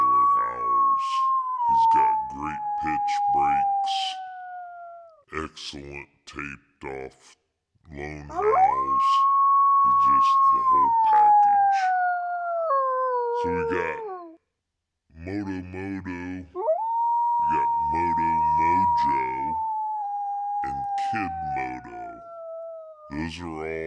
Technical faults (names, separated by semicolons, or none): wrong sample rate